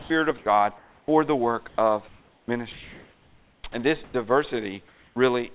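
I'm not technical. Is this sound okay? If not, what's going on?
No. Sound dropped by the voice detector occurs at 0.0 to 0.1 s, 0.38 to 0.46 s, 0.78 to 1.08 s (just before "the work of"), 1.68 to 1.78 s (right after "the work") and 4.04 to 4.14 s. The sending end likely mistook quiet bits of speech for silence and stopped transmitting, so brief hiss fills those gaps.

Sound chopped by the voice detector follows "the work of", from 2.08 to 3.74 s. The sender likely kept switching on and off, so the speech breaks up.

Comfort noise in place of the background appears from 4.88 to 5.16 s. During this pause the sender likely stopped transmitting, and the receiving end filled the gap with smooth, featureless, slightly quieter hiss instead of the actual room sound.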